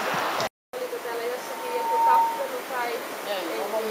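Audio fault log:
1.39–2.65 s, loudspeaker feedback squeal: a 918 Hz tone swells over roughly 0.7 s to about 10 dB above the sound, as the microphone re-amplifies its own loudspeaker.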